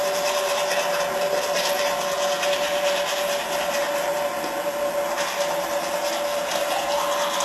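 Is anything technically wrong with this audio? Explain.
Yes. Throughout the clip, the most likely cause is HE-AAC compression at a very low bitrate, roughly 16 kbps. The treble is rebuilt by copying lower bands upward rather than coded directly, so it is plainly gritty and metallic, and nothing remains above 12.3 kHz.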